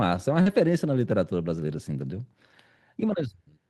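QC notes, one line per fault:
0.33 s and 0.46–0.48 s, lost packet rebuilt from error correction: each 20 ms frame arrived only as the low-bitrate copy carried in the next packet, so nothing drops out, but the audio turns briefly rougher and noisier. It is degraded real sound, not invented sound, and that sets it apart from concealment.
0.41–0.48 s, short concealed packet loss: about 40 ms never arrived, and the receiver extrapolated from the preceding sound for roughly 44 ms, including the blend back. It comes across as a brief smear or wobble rather than a coarse but faithful stretch.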